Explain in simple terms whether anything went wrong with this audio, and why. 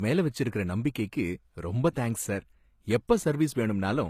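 Something did go wrong, for the whole clip from start to finish. The speech has nothing above about 14.9 kHz and carries the leftover artefacts of heavy compression. This is most likely low-bitrate audio saved at a high bitrate: it was squeezed hard once, then re-saved generously. What sets it apart from an ordinary low-quality file is that the file is large, yet that extra size cannot bring back the detail the first squeeze threw away.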